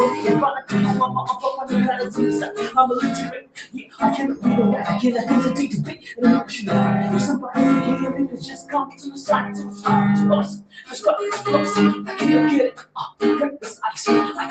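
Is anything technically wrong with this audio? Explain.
Yes, there's a speech-tuned noise suppressor left running on material that isn't speech. It treats steady tones, ambience and decay as noise and turns them down, while sharp attacks slip through. Across the clip, that makes the level swing by something like 15 dB. Sustained parts sink, tails get clipped short, and the whole thing pumps and thins out rather than holding steady.

You can hear sound cut by the noise suppressor at specific points, each a dip where the suppressor bites hardest:
1.31 to 1.72 s, about 10 dB down
2.09 to 2.77 s, about 12 dB
3.28 to 4.01 s, about 17 dB
5.91 to 6.13 s, about 13 dB
8.27 to 9.85 s, about 15 dB (the longest)
10.46 to 11.0 s, about 17 dB
11.96 to 12.15 s, about 7 dB
12.71 to 13.22 s, about 17 dB

The band-limited top, with nothing above 8 kHz, is just the call path doing its normal thing.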